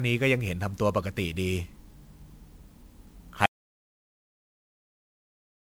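From the start the speech has that swirly, hollow, smeared quality of generation loss, with attacks softened. It's more damage than one 128 kbit/s MP3 pass would do, likely from around seven rounds of re-encoding, each adding fresh quantisation noise and spectral holes. At 3.46 s it's an audio dropout to silence: the sound cuts off mid-flow into silence with no room tone at all, and stays dead to the end. Most likely the input was lost while the recorder kept writing.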